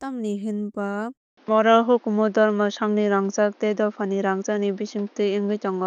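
A speech recording with a likely switch of the input to a poorer device at 1.17 s. The sound drops out for about 0.2 s at that point. From there to the end, nothing reaches above 6.7 kHz, so the speech turns duller and boxier. The level also shifts by roughly 5 dB. A new background noise appears, sitting around 35 dB under the speech. A different microphone or a headset call profile would narrow the band and change the tone and noise this way.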